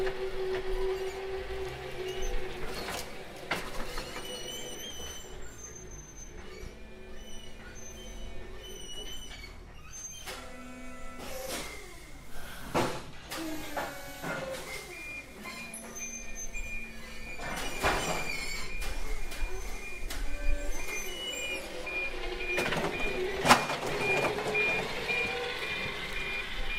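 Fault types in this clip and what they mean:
Nothing stood out on listening to this audio that would point to any technical problem.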